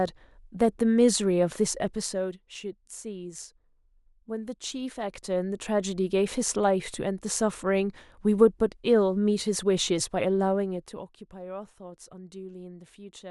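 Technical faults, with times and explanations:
1.86 to 2.41 s and 10.45 to 11.31 s, zipper noise: the level drops by about 10 dB and then about 15 dB, but in discrete steps instead of a continuous ramp. Each jump leaves a tiny discontinuity, and at around fifty steps a second these merge into a buzzy ticking over the speech that lasts only while the level moves. Unlike random crackle, the ticks are evenly spaced.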